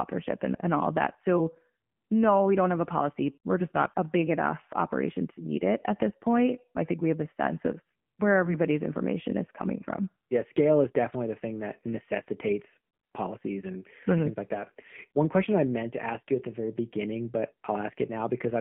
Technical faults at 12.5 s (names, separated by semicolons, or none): AMR narrowband mobile codec